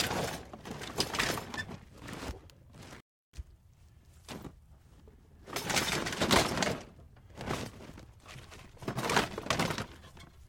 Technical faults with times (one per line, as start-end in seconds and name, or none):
2.96-3.38 intermittent contact